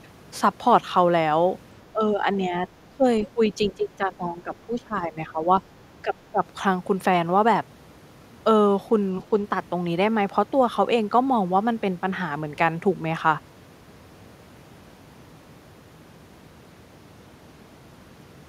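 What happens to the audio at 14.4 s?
Nothing goes wrong at 14.4 s; the speech plays through that moment intact, with no dropout, click or distortion.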